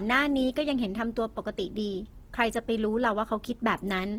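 Throughout, the speech sounds rough and grainy, with a noisy texture over the tones but no muffling, as content reaches about 20.2 kHz. The likely cause is Opus compression in music mode at a low bitrate near 16 kbps, refilling bit-starved bands with noise.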